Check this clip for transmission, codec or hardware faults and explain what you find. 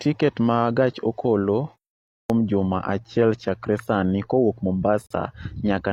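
Two faults are present in this speech clip.

At 2.19 s, a clipped start after a pause: after a 0.5 s silence the output device is still waking, so about 109 ms of onset is lost and speech begins abruptly. Unlike a segment gap, which only inserts silence, this one eats real sound.

From 5.07 to 5.11 s, a gap between stream segments: mismatched segment timestamps leave a hard-edged 40 ms hole of silence, which fits 2-second segments. Nothing is missing; time is inserted mid-sound rather than cut from an onset.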